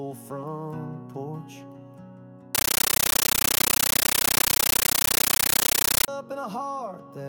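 From 2.55 s to 6.08 s the sound is replaced by chattering static: a compressed stream played as audio. The receiving end took an encoded AC-3 (Dolby Digital) stream for ordinary samples instead of decoding it. Each data frame comes out as a 13.3 ms burst of noise followed by padding, repeating at 31.25 Hz, which is where that rhythmic chatter comes from. Nothing of the actual audio gets through during that stretch.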